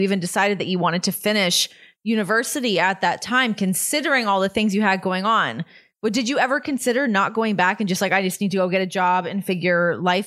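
No technical faults can be heard anywhere in the recording; the speech signal stays continuous and stable throughout.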